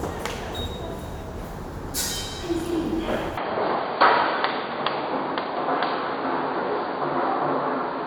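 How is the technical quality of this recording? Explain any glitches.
The recording has one clear fault: from 3.37 s to the end, the everyday sounds lose their top end and pick up a new tone. This points to an input switched to a poorer device, likely a change to a different microphone or a headset's call profile. That path passes nothing above 4.7 kHz, so the sound turns dull and boxy with no gap at the change. It also adds a faint noise floor and a modest level step. On a spectrogram, energy above 4.7 kHz stops abruptly at 3.37 s. The waveform's envelope shifts in height at that point.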